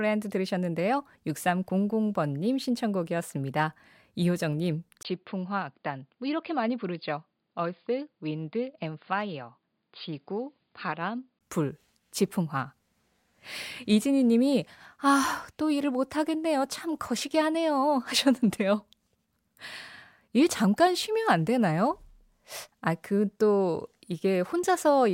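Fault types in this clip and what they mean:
input switched to a poorer device: at 5.03 s the speech turns dull, likely via another microphone; the spectrogram goes empty above 4.9 kHz and the waveform drops about 5 dB.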